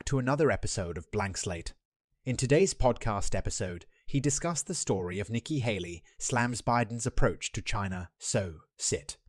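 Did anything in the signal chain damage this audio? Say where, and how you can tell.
No, the signal chain left no audible damage on this speech recording at any stage.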